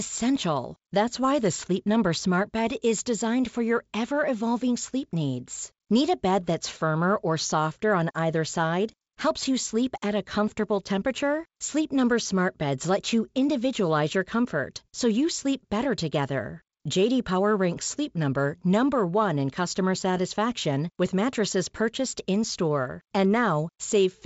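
Nothing here counts as a fault: the speech comes through G.722 wideband telephone coding at 56 kbit/s, with the top end stopping at about 7.7 kHz, just as that path should.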